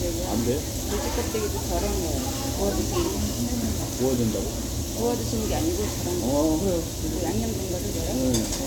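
Generation loss runs through this everyday-sound recording from start to finish, heard as swirling, hollow texture, blurred attacks and nothing above 18 kHz, likely from roughly seven rounds of MP2-style encoding, which fits 128 kbit/s.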